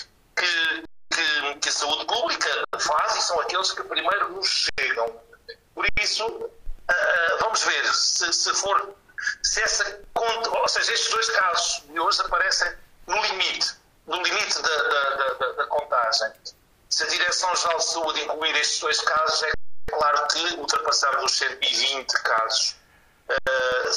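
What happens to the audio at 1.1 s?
At 1.1 s the sound is just coming back from an underrun with held sample, which runs from 0.85 s to 1.11 s, about 256 ms. The output buffer ran dry and the converter froze on its last value, so the waveform shows a flat line and the spectrogram a blank band. Playback resumes where it stopped, with little lost, so the restart is soft rather than a sharp click.

Periodic USB or driver dropouts also run through this moment, from 0.14 s to the end, one every 0.125 s, eight per second. Each time, a background task stalls the bus or driver and a brief slice of audio is replaced with silence, heard as a steady ticking under any signal. On the waveform these are tiny evenly spaced notches, and on a spectrogram thin vertical broadband lines at a regular spacing.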